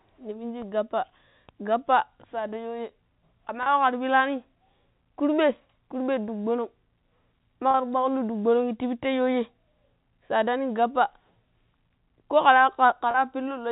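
At 3.63, 7.71 and 13.11 s a brief held, buzzy note lasting about 30 ms interrupts the speech. This is packet loss with pitch repetition: each gap, consistent with a single lost packet, is bridged by repeating the last pitch period over the band-limited G.711 telephone sound.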